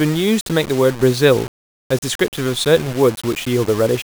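A speech clip with grainy distortion from start to finish that tracks the signal rather than sitting beneath it as a steady hiss. Quiet stretches turn gritty and the softest parts sputter or drop out. The error sits roughly 15 dB below the speech. The likely cause is low bit depth without dither: samples rounded to very few levels, consistent with about 5 bits, so the quantization error stays correlated with the waveform.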